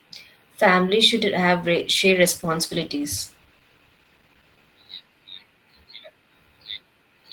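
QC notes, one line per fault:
1.63–5.69 s, call bitrate drop: right after "should have", the sound turns rough and muffled as the encoder codes more coarsely and trims the high frequencies. This fits a fall from 32 to 14 kbps, held at its lowest for 2.99 s before recovering.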